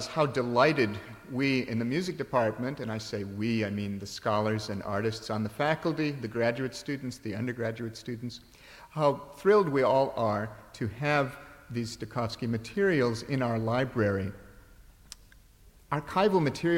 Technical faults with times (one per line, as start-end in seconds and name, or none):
none